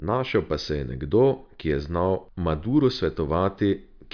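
A short speech recording, with nothing technically wrong audible anywhere in the signal.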